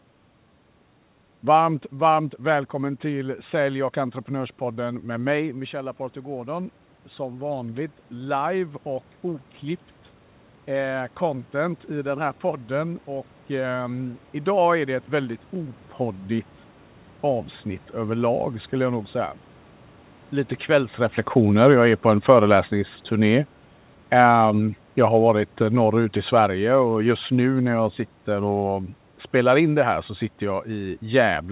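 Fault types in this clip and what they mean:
Automatic gain rising: After the voice drops by about 10 dB near 5 s, the gain control slowly adds about 10 dB from 4.61 to 19.18 s. The room noise swells with it, which sets it apart from the talker's own move.
Automatic gain falling: From 21.34 to 27.71 s, just before "jag sitter och spelar", the level sinks by about 6 dB. Voice and room noise fall together over seconds, unlike a talker leaning away.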